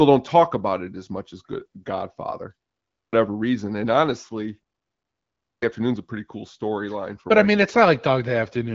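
At 2.91 s the speech comes back out of a pause of about 0.42 s with a clipped start after a pause: roughly 220 ms of sound is missing, so the first word begins abruptly, already partway through, with its opening sounds gone. The same happens at 5.41 s after a pause of about 0.88 s, where roughly 210 ms is lost. In both cases the output path goes idle during the silence and needs time to wake or relock. The first part of the returning signal is discarded while it does so. The band stops near 7.5 kHz, consistent with the AMR wideband (HD Voice) codec running at a rate high enough to cause only light damage.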